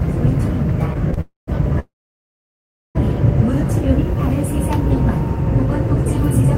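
At 1.14 s a packet arrives late and the jitter buffer runs dry, causing a short stall from a late packet. The receiver holds the last sound for about 28 ms, until 1.19 s, and then carries on from the same point with nothing lost. What you hear is a brief smear where the sound lingers a moment too long, with a faint buzzy dip before it moves on.

Two call audio freezes follow, likely from packets held up in the network long enough to empty the buffer completely. From 1.21 to 1.49 s the last sound is stretched into a fading buzz, and 150 ms of that 266 ms stretch sits in silence. From 1.79 to 2.97 s the same thing happens on a larger scale. A brief tail of concealed sound collapses into about 1.05 s of silence within a 1.16 s hold. After each freeze the audio resumes where it stopped. No content is dropped, but the later sound is pushed back by the inserted gaps.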